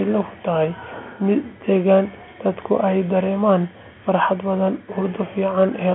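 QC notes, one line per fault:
No fault to note.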